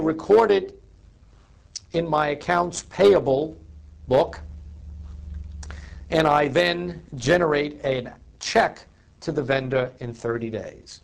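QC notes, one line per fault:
throughout: overlap-add ripple, a metallic buzz with extra tones around each note as the level pumps by about 6 dB around a hundred times a second; the audio was rebuilt from windowed frames whose overlapping gains don't sum evenly, so loudness dips once per frame.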